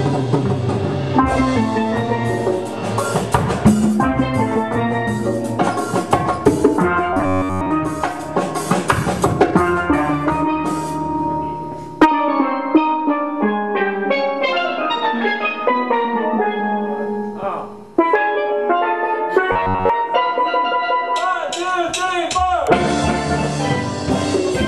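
From 7.13 to 7.72 s, the sound turns into a rigid, metallic buzz near 94 Hz. This is robotic sound from repeated short buffers. New audio likely arrived too seldom, so a slice of about 10.7 ms was looped to fill the gaps. Most of the real audio in that stretch is skipped. The loop rate sets the fixed buzz pitch. The same fault returns from 19.52 to 19.90 s, with the same 94 Hz buzz.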